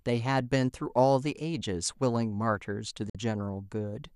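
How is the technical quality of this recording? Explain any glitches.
The recording has one audible glitch, a brief gap in the speech. Digital broadcast dropout, 3.10 to 3.15 s: the receiver lost valid frames and muted, fading out within about 3 ms. Roughly 50 ms of sound vanishes, consistent with two lost frames.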